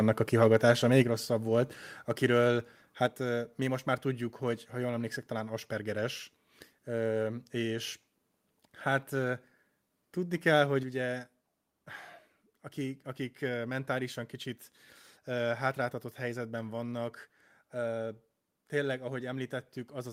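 From 0.42 to 1.0 s, microphone overload flattens the loudest peaks, most likely because the input volume was set too high and drove the converter about 2 dB past its limit. Under one percent of samples are cut, so it's a brief, harsh crackle on peaks rather than constant fuzz.

Then the microphone volume is stepped down at 1.02 s (about 5 dB), 3.06 s and 10.83 s (about 4 dB each), likely software reacting to loud input. Voice and background drop together instantly, unlike a speaker moving away or a gradual gain ride.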